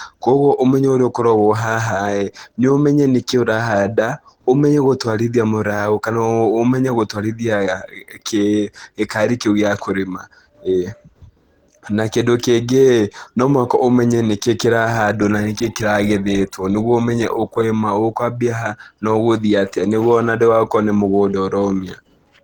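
From start to finish, the speech carries plainly audible coding damage, likely from Opus compression. It sounds hoarse, grainy and a little muffled. The band stays wide, up to 20.1 kHz. The damage fits a low rate near 16 kbps in hybrid speech mode.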